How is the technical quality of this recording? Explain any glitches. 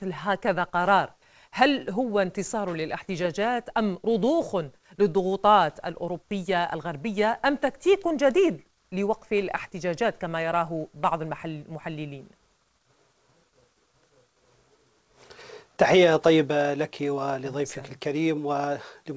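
No glitches or technical faults can be heard here.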